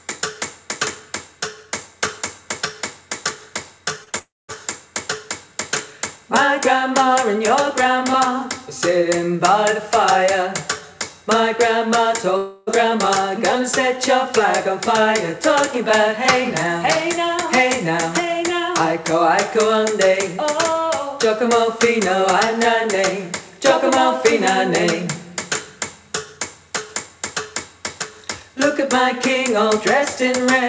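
At 4.04 to 4.09 s and again at 4.09 to 4.16 s, two back-to-back short concealed packet losses each drop 30 ms of audio. The decoder carries the preceding sound across each hole, so they come through as a quick smear or wobble with no silence at all. That brevity is what sets them apart from the longer breaks.

From 4.19 to 4.51 s the sound turns into a continuation that fades, then goes quiet for about 0.21 s before the audio resumes further on. At 12.37 to 12.70 s a similar 0.3 s stretch is bridged by an extended, fading continuation throughout, with no silent stretch. Both are likely long network dropouts, where about 300 ms never arrived and was never played. Unlike the short losses, they are long enough to sound like a break in the sound. The call path's G.722 coding caps everything at 8 kHz, so the bridging sounds are band-limited too.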